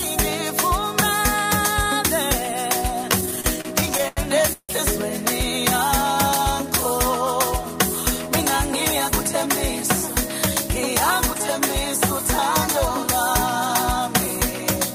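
From 3.11 to 4.71 s the audio drags and stutters, catching on itself in short repeated hitches, the longest holding for about 161 ms. These are repeated stalls (stutter): packets reached the receiver late or more slowly than playback consumed them, so the jitter buffer ran dry around fifteen times. Each time the last sound was stretched to cover the wait, about 435 ms in all and roughly a quarter of that span. Nothing is actually lost.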